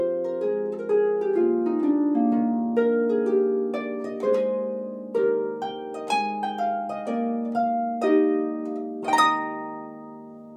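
Nothing stood out as a technical problem on listening to this clip.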